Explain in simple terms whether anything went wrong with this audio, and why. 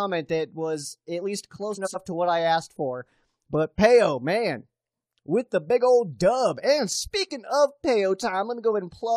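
Between 1.74 and 1.96 s, just after "that was at least" and before "to what I asked", the player received two neighbouring chunks of audio, each about 93 ms long, in the wrong order and played them that way. This fault is called frames out of order. That fifth of a second plays with its two halves swapped, so it sounds like a brief garbled flutter. No audio is missing.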